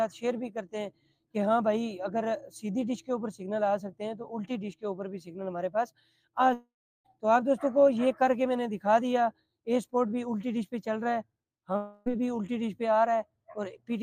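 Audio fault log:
6.53–7.07 s and 11.77–12.08 s, long network dropout: the sound breaks into a decaying buzzy continuation of its last moment. In the first gap, about half a second long, this fades to roughly 0.35 s of silence. In the second, about 0.3 s, the fill runs straight into the return. The likely cause is audio that never arrived and was patched over by the receiver. Unlike a brief glitch or a stall, the fill fades out and playback resumes further on with the lost part skipped rather than delayed.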